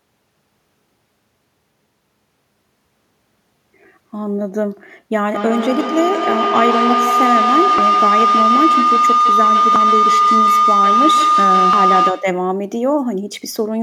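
At 3.83 s the speech jumps forward with a tiny gap, a few hundredths of a second gone and the two sides butted together with no silence. The same skip returns at 5.81, 7.78, 9.76 and 11.73 s, a steady rhythm of about one every 2 s. That regularity is the signature of audio missing between chunks: the likely cause is a recorder or processor handling the signal in 2 s blocks and dropping roughly 30 ms each time it closes one block and opens the next.

From 5.35 s a pitched tone rises under the speech and swells into a sustained howl near 1 kHz, pulsing roughly every 150 ms and peaking about 4 dB louder than the speech before it stops at 12.5 s. This is feedback howl. Two devices in the same room are joined on one call, so sound from a loudspeaker re-enters a microphone and comes round again louder on each pass. The loop reinforces the frequencies it favours until only that tone remains, and the pulsing follows the loop's delay of about 150 ms. 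The skips at 5.81, 7.78, 9.76 and 11.73 s fall inside this stretch and cut through the howl as well.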